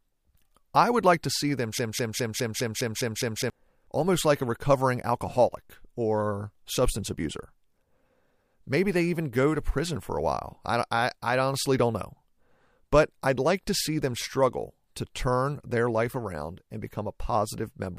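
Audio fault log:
1.79–3.50 s, broken-record loop: a 0.20 s fragment of the speech repeats exactly, back to back, 8 times. The passage stutters mechanically and the speech that belonged there is lost, likely because a stalled player or stream kept resending its last buffered fragment.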